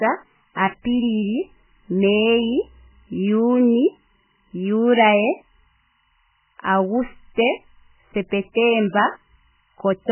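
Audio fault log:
throughout, timecode bleed: Behind the speech runs a steady chirping warble that flips between two pitches an octave apart, near 1 kHz and 2 kHz. This is linear timecode leaking in from a neighbouring line, its code rhythm fitting 25 frames per second. It sits far beneath the speech, around 45 dB down. A hum or a single whistle holds one pitch, but this keeps alternating between the octave pair in a data-like pattern that never changes with the speech.
throughout, MP3 compression: The speech sounds watery and swirly with heavy damage, attacks are smeared, and nothing is heard above 3 kHz, so sibilants lose their edge and turn metallic. The likely cause is MP3 encoding at a very low bitrate, around 8 kbps. Starved of bits, the encoder zeroes weak frequency lines that blink on and off from frame to frame and cuts the treble at a fixed point. A plain low-pass filter would dull the sound without this shifting, bubbling texture.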